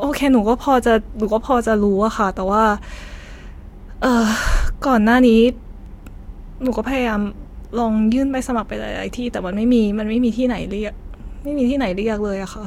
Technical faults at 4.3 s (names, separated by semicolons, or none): none